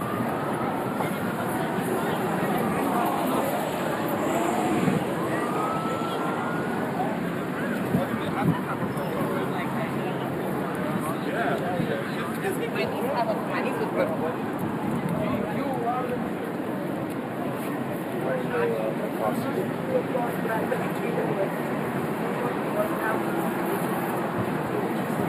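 Throughout the recording, the sound carries channel delay (comb filtering): one channel runs a few samples behind the other, under a tenth of a millisecond, and mixing the two to mono cancels their shared content at evenly spaced frequencies. The first notch sits around 7 kHz, so the top end sounds thin and phasey. Unlike a low-pass roll-off, the loss is a fixed notch with energy returning above it, not a smooth fade.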